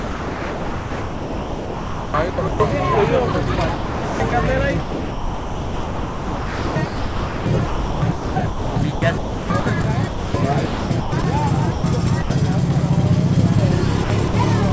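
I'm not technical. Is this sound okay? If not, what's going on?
No. The main problem is sound chopped by the voice detector, likely from a call system deciding what counts as worth sending. From 0 to 2.6 s, 3.32 to 4.32 s, 4.8 to 10.34 s, 10.66 to 11.24 s and 14.04 to 14.34 s, bits of the real sound keep getting swapped for a soft fake hiss, so it sounds choppy.

There are also two short spots of sound dropped by the voice detector, at 11.72 to 11.84 s and 12.22 to 12.30 s. For about a tenth of a second each, the sound just disappears into steady hiss before coming back. The call line also cuts off everything above 8 kHz.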